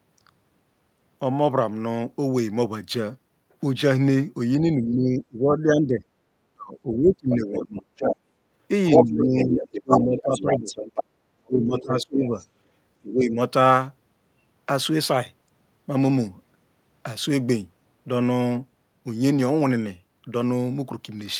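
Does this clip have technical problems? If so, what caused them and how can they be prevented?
Yes. There's speech suppressed in double talk at 4.61–7.86, 9.0–10.71, 11.39–12.4 and 13.01–13.37 s, with the talker dipping by up to roughly 30 dB. It's likely the echo canceller ducking both voices when both sides talk at once. A headset or a better double-talk detector would keep the near talker from being turned down.

The other side's voice is leaking through at 7.55–8.16, 8.9–11.04 and 11.78–12.47 s, about as loud as the talker at first and much quieter in the last stretch. That's likely loudspeaker echo the canceller didn't fully remove. Using headphones or lowering the speaker volume would keep that echo out of the mic.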